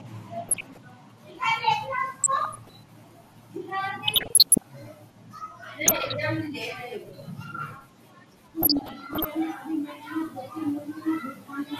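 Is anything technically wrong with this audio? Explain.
Yes, two faults are audible. Throughout, the speech sounds dull, with a gurgling, grainy texture. This is plainly audible MP2 compression, likely at a low bitrate, which fits around 80 kbps. Starved of bits, the encoder switches off upper sub-bands and coarsely quantises the rest. Unlike burbling, this damage is constant rather than in bursts.

DAB burbling occurs at 0.48–0.85 s, 2.20–2.75 s, 4.07–4.66 s, 5.86–6.14 s and 8.62–9.25 s. Bit errors, at a rate around 0.4 percent to one percent, slip past error correction and corrupt samples and scale factors. Single sub-bands then get short blips of noise or jump in level, producing burbling blips against the steady compression dullness.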